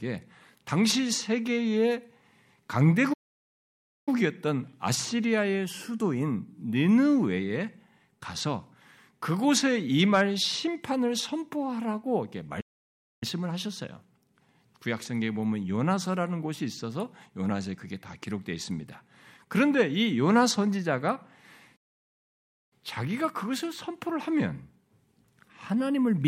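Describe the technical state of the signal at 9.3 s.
At 9.3 s the speech signal is intact, with no audible dropout, clipping, distortion or other technical fault at that moment.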